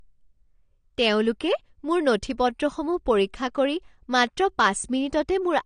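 All the way through, the speech sounds dull and smeared, with a warbly, fizzy edge on the sibilants. That's likely AAC compression. The AAC-LC encoder fits a bitrate around 32 kbps, too few bits to keep the upper bands intact.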